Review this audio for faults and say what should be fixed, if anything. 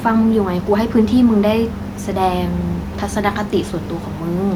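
Nothing in this speech recording needs fixing, since no system fault can be heard. The room's background noise sits about 29 dB below the speech and belongs to the recording itself.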